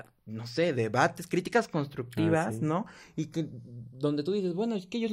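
Channels drifting apart throughout: the two sides run on clocks roughly 70 ppm apart, so their offset creeps to a fraction of a millisecond, giving slow flanging in mono.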